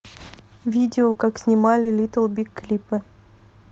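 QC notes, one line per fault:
1.11–1.16 s and 1.82–1.86 s, short concealed packet loss: twice, audio packets failed to reach the decoder in time, leaving gaps of about 40 ms and then 30 ms. The receiver patched each hole by extending the preceding sound, following its pitch where voiced or substituting shaped noise where not, before crossfading back to real audio. Each patch is heard as a brief smear or wobble under the Opus call path's roughly 8 kHz band limit.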